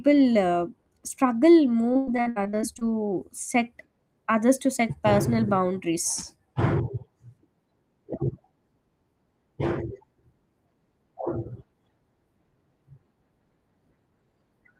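Repeated packet loss (robotic sound) runs from 1.93 to 2.83 s. Audio data went missing again and again, with each hole patched by stretching the preceding sound. About 37% of that span is patched audio, and the longest gap is about 97 ms, giving choppy speech with pieces missing.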